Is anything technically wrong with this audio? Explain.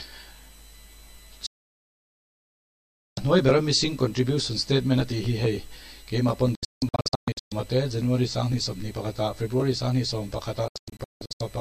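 Yes. A digital broadcast dropout occurs three times. The receiver lost valid frames and muted within about 3 ms: one solid gap from 1.46 to 3.18 s, then scattered holes from 6.55 to 7.52 s and from 10.68 to 11.41 s, each hole up to 168 ms, with the missing sound gone.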